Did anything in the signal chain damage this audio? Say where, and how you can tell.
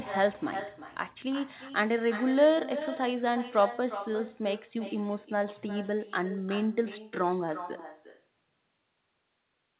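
Yes. Call processing shows an echo with no canceller. Phrases return about 0.4 seconds later, about 12 dB quieter. The far loudspeaker leaks into its microphone.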